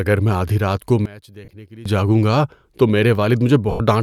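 Right after "میں آدھی رات کو", from 1.06 to 1.86 s, the voice nearly disappears, dropping by about 21 dB and leaving a faint trace until "جاگوں گا تو" comes back at full strength. That sounds like one channel inverted, most likely: with one side's polarity flipped, the centred voice cancels when the channels are summed to mono, and only the small difference between them gets through.

Inside that dip, at 1.45 to 1.48 s, there's a 30 ms stretch of lost LE Audio frames, which fits about three 10 ms frames going missing. The LC3 decoder fills the gap by replaying the last spectrum with scrambled signs, so the voice briefly smears into a noisy blur. The same thing happens again from 3.71 to 3.80 s, a longer 90 ms gap, where the smear fades out toward silence before the audio returns.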